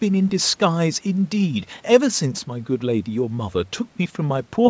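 Listening to this speech recording, nothing stood out as a technical fault; it carries the expected sound of a call's microphone processing, with the lowest bass trimmed and nothing above 8 kHz.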